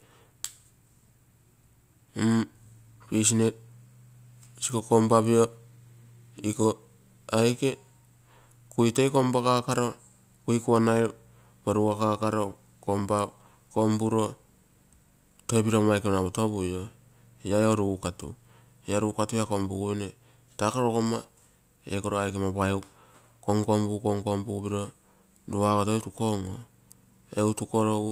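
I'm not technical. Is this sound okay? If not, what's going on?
Yes, it sounds fine.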